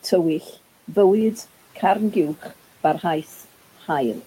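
From 0.41 to 0.55 s, the noise suppressor cuts into the speech, treating a quiet stretch of it as background and pulling it down by up to about 7 dB, for roughly a tenth of a second in total. That sound comes out swallowed and faint. On a waveform the envelope sags abruptly there. On a spectrogram the weak upper-frequency energy thins toward the level of the room noise, which sits about 24 dB below the speech.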